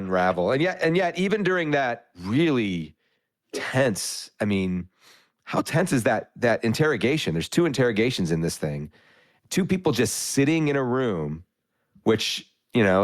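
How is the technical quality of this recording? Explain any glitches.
No audible glitches or faults.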